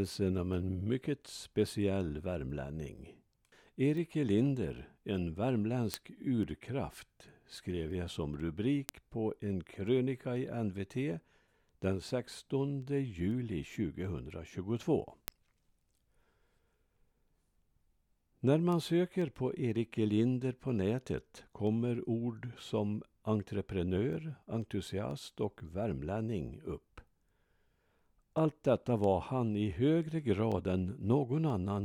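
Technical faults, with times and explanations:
0.54–31.5 s: word clock ticks roughly every half second, as an unlocked receiving clock slips one sample each time; their steady rhythm distinguishes them from random clicks.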